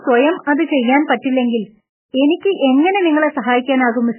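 A short speech recording with heavy codec damage throughout. The sound is watery and swirly, and nothing is present above 3 kHz. This points to MP3 compression at a very low bitrate, with the sound fitting something around 8 kbps. The likely cause is an encoder starved of bits, zeroing weak frequency lines so they flicker between frames and cutting the treble at a fixed point. Unlike a simple low-pass filter, the band that remains also shimmers and smears rather than just sounding dull. Just after "സ്വയം അത് ചെയ്യാൻ", pre-echo appears twice: a hiss from 1.05 to 1.10 s (48 ms) and another from 1.22 to 1.24 s (22 ms), each running ahead of an attack. The codec spreads quantisation noise across a whole block, so noise sized for the loud onset leaks into the quiet moment before it. What separates this from room reverberation or a delay echo is that the smear comes before the attack, not after it.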